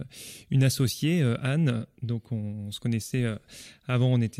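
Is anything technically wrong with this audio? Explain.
No, nothing technically wrong can be heard in this speech recording. There is no fault to point to at any moment in it.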